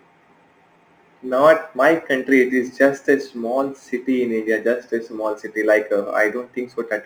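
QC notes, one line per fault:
Throughout: crude rate conversion. Samples are simply dropped or repeated rather than filtered, which fits a 48 kHz to 44.1 kHz change. The uneven timing adds inharmonic grit around 30 dB below the speech, fizzing most on loud and sibilant sounds.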